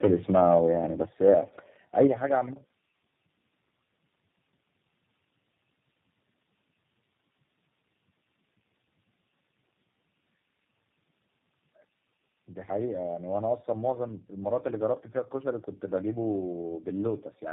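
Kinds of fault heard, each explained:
tandem speech coding: The speech passed through several low-rate speech codecs in succession, each one re-encoding the previous one's already degraded output. The damage compounds: the whole clip sounds rough, muffled and warbly, with nothing above 3.7 kHz. The character fits a chain of three speech coders, such as GSM full rate, iLBC and G.729A, joined by G.711 links, with G.729A as the last stage.
microphone volume stepped down: The level of everything, speech and background alike, drops abruptly in a single step, by about 6 dB at 1.05 s and about 9 dB at 2.07 s. The second drop comes right after the clipped peak ending at 2.05 s. The likely cause is the call software detecting an over-hot or clipping input and lowering the microphone's input volume.
microphone overload: The loudest peaks exceed the converter's full scale and have their tops flattened, adding a harsh, crackly edge. 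This happens from 1.23 to 1.37 s, about 2 dB over, with a small share of samples clipped, and from 2.0 to 2.05 s, about 3 dB over, with roughly a tenth of samples clipped. The likely cause is the microphone input volume being set too high.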